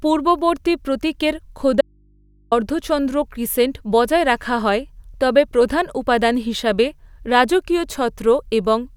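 At 1.81 s, after "পূর্ববর্তী প্রতীকের", an audio dropout to a faint residue cuts the speech for 0.71 s. Only faint mains hum remains, likely from an open input.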